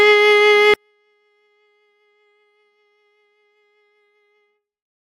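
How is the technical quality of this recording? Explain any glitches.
The recording has one serious fault: from 0.74 s to the end, the music nearly vanishes. This is a 24-bit alignment error that makes the audio far too quiet. The 24-bit samples sit in the low bytes of each 32-bit word, but they are being read as full 32-bit integers. Every value is therefore interpreted 8 bits too small, which cuts the level by about 48 dB. The music stays undistorted, but it drops abruptly to a barely audible level and remains there.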